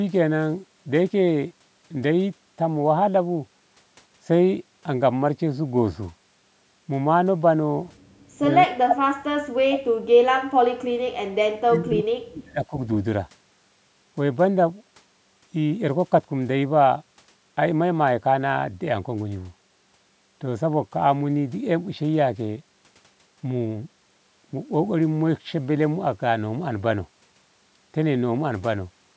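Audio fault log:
8.31–10.89 s and 11.43–12.74 s, speech suppressed in double talk: the speech sinks by up to about 40 dB. This is likely an echo canceller mistaking overlapping talk for echo and ducking both.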